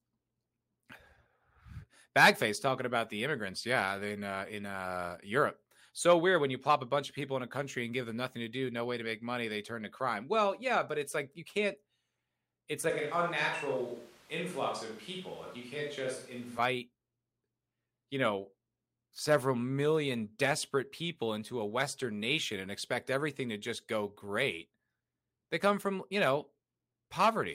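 At 12.90 s the speech suddenly turns roomy and hollow and loses its low end, with background noise rising to sit roughly 25 dB below it, though the level barely changes. It snaps back at 16.58 s, likely a switch to a distant microphone.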